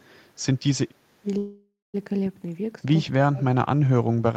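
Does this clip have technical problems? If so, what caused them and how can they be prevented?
Yes. Between 1.21 and 1.26 s, and again from 3.17 to 3.89 s, the speech is suppressed in double talk: the level dips, by roughly 20 dB in the brief first case and nearly 30 dB in the longer second one. This is likely an echo canceller that heard both sides at once and turned down the near talker along with the loudspeaker echo. Unlike a dropout, the timing runs on unbroken while the level falls. Better echo-path modelling and gentler residual-echo suppression during double talk prevent it.

From 1.37 to 1.96 s there is a call audio freeze: the last sound is stretched into a fading fill that ends in about 220 ms of silence, and then the speech resumes exactly where it left off. That points to delayed packets draining the jitter buffer. Unlike packet loss, nothing is missing; instead about 0.56 s of extra delay has been inserted. 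A larger adaptive jitter buffer and a more stable network path prevent it.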